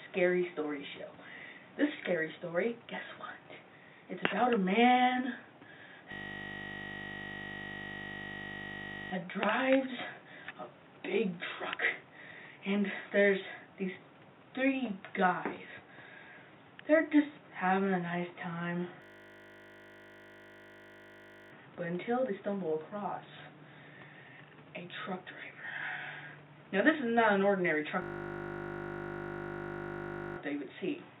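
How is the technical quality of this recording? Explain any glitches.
The recording is marred by three system hang loops. They run from 6.12 to 9.12 s, 19.02 to 21.52 s, and 28.02 to 30.38 s. Each time, the system stalled while the sound hardware kept replaying its ring buffer. A 20 ms slice repeats exactly, 50 times a second. That produces a steady, flat buzz at 50 Hz, which fits a very short buffer. The sound resumes without an audible gap afterward.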